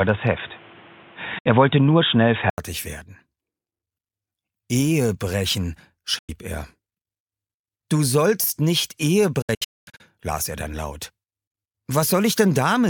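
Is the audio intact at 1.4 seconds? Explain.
No. A digital broadcast dropout runs from 1.38 to 1.46 s: the receiver lost valid frames and muted, fading out over about 8 ms and leaving a 64 ms hole, which fits two lost frames. An input switched to a poorer device, likely the cause of the dull sound from 0 to 2.58 s, cuts everything above 3.8 kHz, adds a noise floor roughly 30 dB down, shifts the level by several dB, and leaves an 80 ms silence at the switch.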